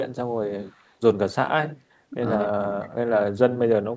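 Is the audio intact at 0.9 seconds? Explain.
No. An echo leak runs from 0.62 to 0.94 s. A very faint copy of the speech trails the original by 272 ms. The likely cause is a loudspeaker at the far end whose echo canceller let some of its microphone pickup return down the call.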